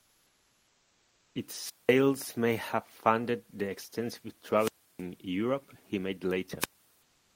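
Comfort noise in place of the background runs from 0.00 to 1.35 s. The room's own ambience, which sits about 40 dB below the loud parts of the speech, is replaced by a steady, featureless hiss about 4 dB quieter. The likely cause is discontinuous transmission of the kind Opus uses: the sender stops sending while its voice detector hears no speech, and the receiver fills the pause with synthetic noise roughly matched to the background.

Wireless microphone squelch dropouts follow at 1.60 to 1.94 s, 4.57 to 5.03 s, and 6.60 to 6.70 s. Each time, the FM radio link weakens, hiss briefly rises, and then the receiver's squelch mutes the output. That leaves holes of near silence lasting about 195 ms, 316 ms and 66 ms before the sound returns.

From 7.02 s to the end, comfort noise replaces the background again, this time about 2 dB quieter than the real ambience.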